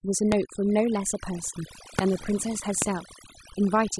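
A speech recording with overdone noise removal throughout. The background drops and breaks up into twinkling specks. Three loud pops sit on top of the speech, at 0.32–0.34 s, 1.99–2.01 s and 2.82–2.84 s. Each is a single sharp pop, roughly 20 dB above the speech, likely from a switch, plug or static spike.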